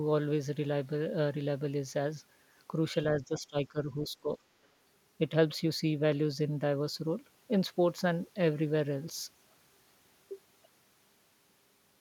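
From 3.13 to 3.8 s, and again from 4.03 to 4.43 s, the talker's level sinks in patches, dropping by around 15 dB at its deepest. This is speech suppressed in double talk, likely caused by an echo canceller that could not tell the near talker from loudspeaker echo while both sides spoke and so attenuated everything. The first span loses level for a few hundred milliseconds, the second for a couple of hundred. On a waveform the envelope pinches inward in these stretches. A spectrogram shows the energy bands fading.

From 4.64 to 4.68 s, a brief scrap of the other side's voice leaking through appears. It is very faint, roughly 40 dB below the talker, and likely comes from echo the canceller left in the microphone signal. It is heard as a tiny flicker rather than distinct speech. In a spectrogram it is a short, low-energy smear, and the waveform shows almost nothing.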